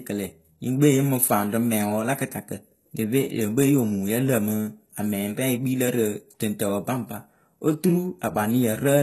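Throughout, the treble sounds synthetic and gritty, with lispy s sounds, likely from HE-AAC compression at around 16 kbps; a spectrogram shows smeared, copied upper bands stopping at 12.3 kHz.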